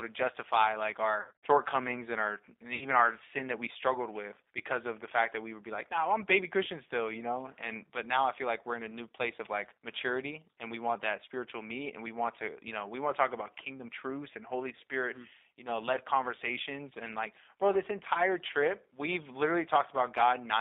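Throughout the recording the speech carries the signature of the G.729 codec. Everything sits in a narrow telephone band of roughly 300 Hz to 3.7 kHz, and the voice has a plainly audible rough, slightly synthetic grain. That grain comes from rebuilding each 10 ms frame from a vocal tract filter, a pitch predictor and a few pulses, which fits an 8 kbit/s G.729A stream. Because the roughness is steady, it is a coding artefact rather than a transmission fault.

The first VoIP packet loss concealed by the speech codec begins at 1.21 s, right after "to justify like", and runs to 1.47 s. The gaps are scattered rather than one clean hole. About 160 ms of sound is missing across a 220 ms stretch, and the longest single gap is about 70 ms. In each gap the decoder keeps replaying its last pitch and filter at falling gain, so the sound smears into a buzzy tone or coloured noise that fades, instead of dropping to silence or clicking. 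The voice also stays weak for a moment after the gaps, because each new frame builds on the damaged one before it.

A shorter loss follows at 2.75 to 2.86 s, between "and our and" and "our sin that we". It covers about 60 ms, which gives a brief stretched, fading sound and a weak or distorted recovery.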